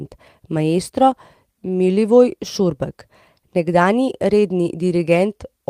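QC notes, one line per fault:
Nothing to flag; the speech has no audible faults.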